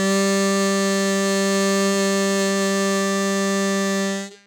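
No technical faults are audible.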